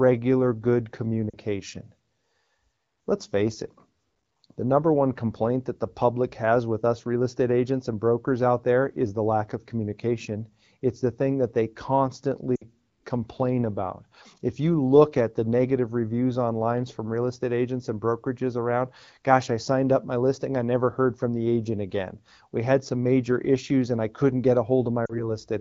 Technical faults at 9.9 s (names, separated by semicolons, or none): none